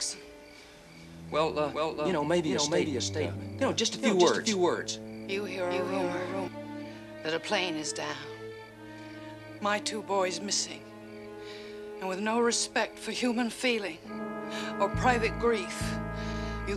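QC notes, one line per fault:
0.00–6.48 s, doubled audio track: a slower second capture path or out-of-step edit likely mixes in an extra copy that trails by around 400 ms, roughly 5 dB quieter, full-band and dry, already present at the start and stopping abruptly at 6.48 s.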